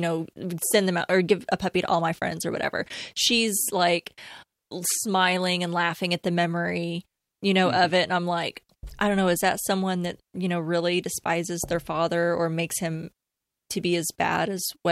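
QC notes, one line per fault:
No audible faults found.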